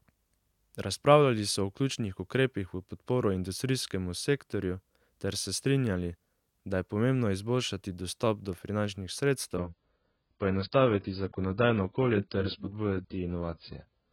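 At 9.58 s, right after "do finančnih", the speech abruptly drops in quality with no gap and stays that way to 14.13 s. This is an adaptive stream at a lower bitrate, switching mid-stream to a much leaner encode. Nothing remains above 5.1 kHz, and the result sounds dull and smeared with codec artefacts, consistent with a fall from roughly 96 to 12 kbit/s AAC.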